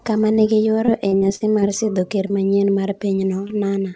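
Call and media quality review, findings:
Short concealed packet loss at 0.36–0.39 s, 2.28–2.31 s, 3.15–3.19 s and 3.47–3.51 s: brief smear or wobble. Jitter buffer/PLC bridged roughly 20 ms holes by extending preceding sound, then crossfaded back.

Repeated packet loss (robotic sound) 0.85–1.64 s: choppy stretch with five holes, longest 51 ms, about a fifth of the span synthesized. Successive concealments in quick succession. Band stops at 8 kHz, which fits the G.722 call path at 64 kbps.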